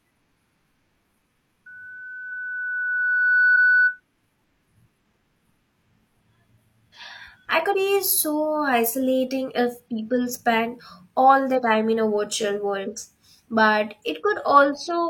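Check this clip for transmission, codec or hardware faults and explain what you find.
Two kinds of fault turn up in this speech: one stretch of acoustic feedback and two short skips in the decoded stream.

Loudspeaker feedback squeal, 1.66 to 4.00 s: the microphone hears its own loudspeaker, and at 1.5 kHz the loop gain tops unity. That tone swells over roughly two seconds into a steady squeal sitting about 5 dB above the speech.

Compressed frames skipped, 7.70 to 7.75 s and 11.54 to 11.60 s: whole compressed frames never reach playback, so the audio jumps forward by roughly two frames (around 100 ms) and then one (around 40 ms). The steps fit frames of about 43 ms.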